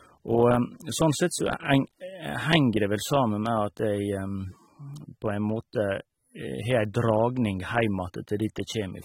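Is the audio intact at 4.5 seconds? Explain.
No. At 4.5 seconds, as throughout, the speech sounds dull and smeared with a fizzy, warbling edge and nothing above 16.5 kHz, likely AAC compression from heavy quantisation at a low bitrate, perhaps around 27 kbps.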